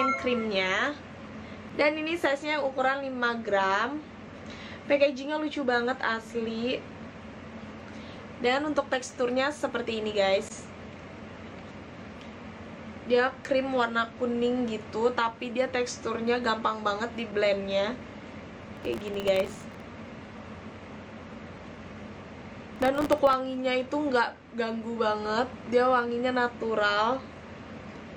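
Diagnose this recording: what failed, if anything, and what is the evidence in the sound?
Processor overload crackle in the driver buffer stage, at 18.77–19.80 s and 22.76–23.33 s. Dozens of sub-millisecond buffers missed deadlines, replaying old audio as gritty tearing.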